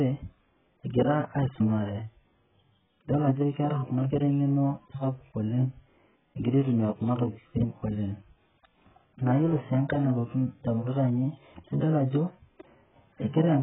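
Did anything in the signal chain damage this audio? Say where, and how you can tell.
Yes, at the codec stage. Throughout, the speech sounds dull and warbly, and a spectrogram shows a flat ceiling at 3.7 kHz. This is likely heavy AAC compression, fitting roughly 8 kbps.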